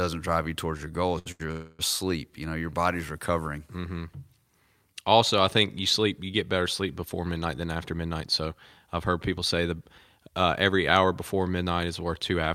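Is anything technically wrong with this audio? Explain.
Yes. The speech shows two short stalls from late packets, a call audio freeze, and three stretches of jitter buffer speed-up.

At 1.19 to 1.28 s and again at 1.32 to 1.41 s, a packet failed to arrive on time and the jitter buffer emptied. Each time the receiver held the last bit of sound for 68 ms and then 79 ms until the packet showed up, then resumed from the same point. Nothing is lost, but the sound briefly hangs and smears with a faint buzz.

From 1.51 to 1.81 s the audio freezes for 273 ms. This was most likely caused by packets held up in transit, which drained the jitter buffer for longer. The receiver kept the last sound going as a fading buzz and never reached full silence. When delivery resumed, playback continued where it stopped, so a gap was inserted without any speech being dropped.

Later, the buffer held more audio than its target, as happens when delayed packets arrive in a burst. 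To cut that extra delay, the receiver repeatedly removed tiny pitch-period slices. It ran at 108% from 7.45 to 9.18 s, trimming about 150 ms, then at 107% from 9.58 to 11.05 s and at 109% from 11.59 to 12.48 s, trimming about 100 ms each. The speech sounds rushed while its pitch stays the same.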